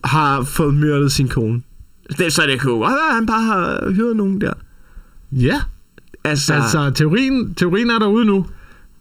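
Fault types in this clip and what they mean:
Channel delay (comb filtering), throughout: one channel lags by under a millisecond, so the mono sum cancels at regular frequencies from around 700 Hz upward, hollowing the speech.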